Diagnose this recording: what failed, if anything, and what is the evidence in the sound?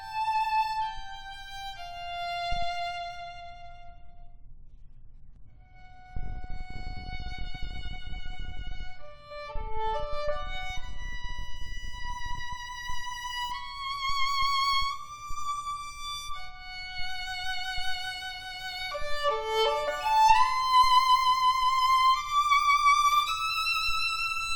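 Nothing in the chain failed: wiring, conversion, buffering, processing, transmission and playback all leave no audible trace anywhere in the audio.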